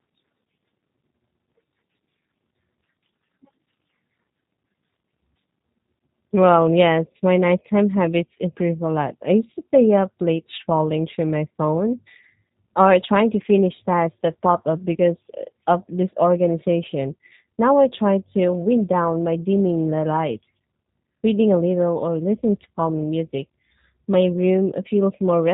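Throughout the speech, G.729 codec damage is plainly audible. Nothing above 4 kHz survives, so the sound is dull and boxy. The voice is rebuilt from a filter and sparse pulses in 10 ms frames. It comes out rough and faintly synthetic, which fits an 8 kbit/s G.729A link.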